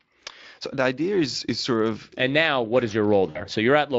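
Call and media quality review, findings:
VoIP packet loss concealed by the speech codec, 3.29–3.41 s after "now what is": about 60 ms gap, fits three 20 ms frames, bridged by Speex decoder extrapolating last pitch and filter with decaying gain.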